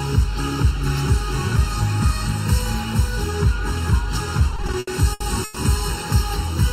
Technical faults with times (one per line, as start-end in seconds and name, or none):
0.00-6.72 channel delay (comb filtering)
4.39-5.58 repeated stalls (stutter)